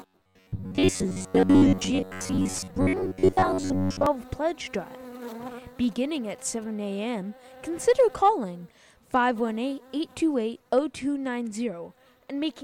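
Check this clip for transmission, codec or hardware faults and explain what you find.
Two faults are present. From 0.01 to 4.06 s there is robotic sound from repeated short buffers: a rigid, metallic 93.8 Hz buzz, likely from reused blocks of about 10.7 ms. Its fixed pitch separates it from codec warble. From 5.84 to 6.64 s come GSM signalling bursts, galloping short buzzes repeating at 216.7 Hz and about 25 dB below the sound, with gaps unlike continuous mains hum.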